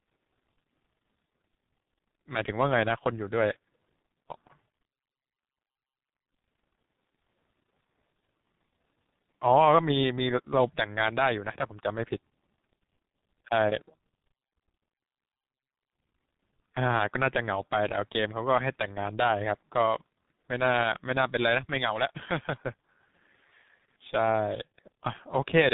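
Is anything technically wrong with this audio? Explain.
Yes. Throughout the speech there is tandem speech coding: the signal passed through G.726 at 40 kbit/s, then G.711 mu-law at 64 kbit/s, and finally G.723.1 at 6.3 kbit/s, each stage re-encoding the previous stage's damaged output. The result sounds rough, muffled and warbly. On a spectrogram, energy stops flat at about 3.8 kHz, and the harmonics look smeared and blotchy instead of forming clean striations. The waveform envelope looks grainy and less sharply defined.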